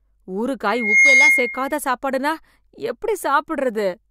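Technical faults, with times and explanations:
0.66–1.77 s, loudspeaker feedback squeal: a piercing tone near 2.1 kHz swells over about a third of a second until it sits roughly 10 dB above the speech, then holds as a steady squeal until it stops. A microphone is picking up the loudspeaker it feeds, and at 2.1 kHz the loop gain passes one, so that frequency keeps feeding on itself and grows until the amplifier limits it or the loop is broken.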